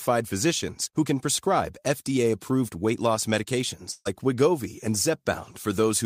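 At 3.91 s a burst of packet loss runs to 4.07 s. The receiver carries the last sound forward for about 140 ms, fading it to a brief silence, and about 140 ms of speech is skipped. That smeared, decaying fill is what sets it apart from a clean dropout.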